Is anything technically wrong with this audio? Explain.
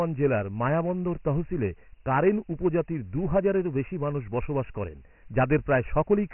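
Yes. Dialogic VOX ADPCM coding affects the whole clip. Each sample is stored as a 4-bit step that only nudges the previous value up or down, and the 24 kbps rate points to 6,000 samples a second, so nothing survives above 3 kHz. The speech sounds narrow and muffled, like an old phone line, and the coarse steps leave heavy damage: a gritty hiss that rides along with the speech.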